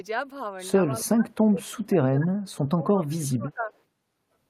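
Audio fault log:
0.89–2.34 s: speech suppressed in double talk. The speech dips by as much as about 35 dB, likely because an echo canceller mistook it for loudspeaker echo.
2.55–3.70 s: speech suppressed in double talk. Roughly a second of speech sinks up to about 30 dB, likely from echo suppression clamping down while both sides talked.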